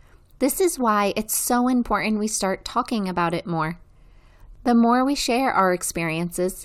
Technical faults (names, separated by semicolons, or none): word clock ticks